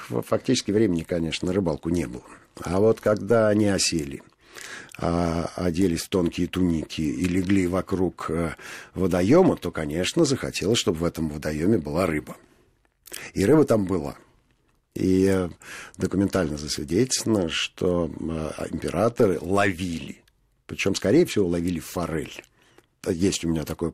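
No technical faults occur at any point in the speech recording.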